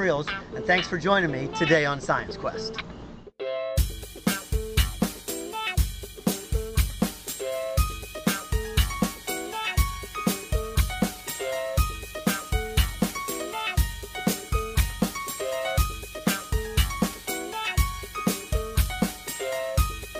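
No faults detected anywhere in the recording.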